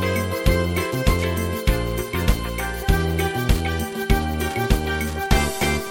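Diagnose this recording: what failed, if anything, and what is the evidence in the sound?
The analogue wiring picked up Wi-Fi interference. A steady tick runs through the whole recording, about 25 dB below the sound, repeating every 102.4 ms. A nearby Wi-Fi radio's beacon bursts were rectified by the audio circuit and added to the signal.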